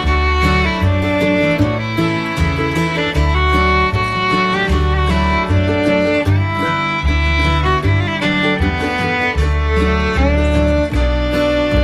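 No faults are audible anywhere in the clip.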